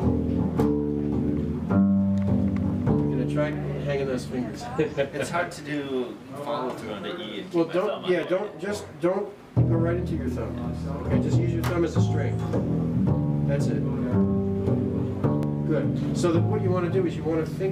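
Four single sharp clicks break the sound at 3.53, 5.67, 8.23 and 15.43 seconds, each a brief tick that shows as a thin vertical line across the whole spectrum. These are likely dropped samples: at each point a tiny stretch of the stream, roughly 0.7 ms, went missing, so the waveform leaps straight from one value to a later one. The gap is too short to remove anything audible; only the abrupt step is heard.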